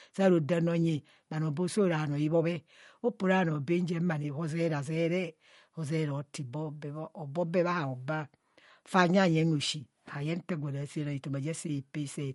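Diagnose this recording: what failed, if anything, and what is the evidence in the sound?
Codec stage, likely MP3 compression near 48 kbps: treble stops at 11.2 kHz, and weak bands toggling between frames leave an audible watery swirl throughout.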